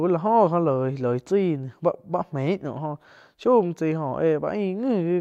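Nothing goes wrong anywhere in this recording, so there's no fault to point to at any moment.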